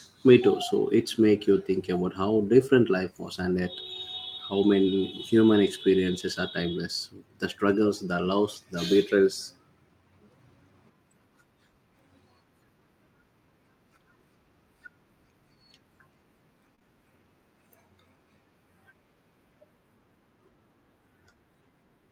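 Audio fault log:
4.39 s, lost packet rebuilt from error correction: one packet was lost, and the decoder played its low-bitrate copy from the next packet, so 20 ms sounds rougher and noisier without any gap.
16.75 to 16.82 s, short concealed packet loss: two consecutive 20 ms packets missed the decoder, which filled each by continuing the preceding sound, giving a brief smear before the real audio blends back.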